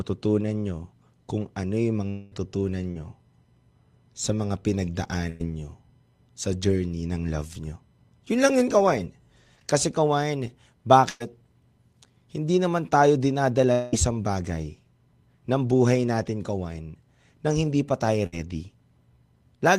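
A speech recording with a rough network path: it has two long network dropouts, one short concealed packet loss and three bursts of packet loss. The two long network dropouts sit at 2.09 to 2.33 s and 13.72 to 13.94 s, the second right after "naman tayo dinadala". In each, the sound is smeared forward as a fading buzz or hiss for about 0.2 s with no true silence, and then picks up again with roughly that much audio gone. The likely cause is a stall long enough that the receiver ran out of real audio and had to invent filler until packets came back. The short concealed packet loss is at 2.91 to 2.97 s. About 40 ms never arrived in time, so the decoder extended the preceding sound and crossfaded back. It comes through as a quick wobble or smear, and a brief consonant there could simply vanish. The bursts of packet loss are at 5.29 to 5.42 s, 11.10 to 11.22 s, and 18.26 to 18.34 s, the last just after "nang hindi pa tayo". 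Each burst is a run of lost or late packets, about 100 ms missing in the first two and 60 ms in the last. The receiver holds the last sound and lets it sag in level across the gap, giving a brief held buzz or hiss, then jumps ahead with that stretch gone.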